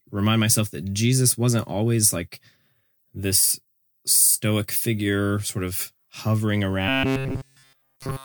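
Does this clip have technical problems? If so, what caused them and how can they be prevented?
Yes. Robotic sound from repeated short buffers runs from 6.89 s, right after "figure sort of hovering", to the end at 8.25 s, where nearly everything is a fixed, metallic buzz at 134 Hz. The likely cause is new audio arriving too seldom, so a roughly 7.5 ms chunk keeps being replayed. Keeping the audio flow steady with a larger buffer or jitter buffer and enough processing headroom would prevent it.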